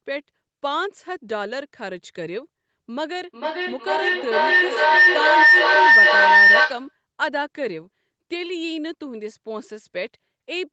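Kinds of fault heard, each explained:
Feedback howl: From 3.24 s a tone around 2 kHz rises out of the speech. It pulses roughly every 0.4 s and swells until it sits about 14 dB above the speech, then ends at 6.97 s. Two devices in the same room share the call, and each trip from loudspeaker back into microphone adds level. So the repeats grow rather than fade, narrowing onto the frequency the loop favours, near 2 kHz.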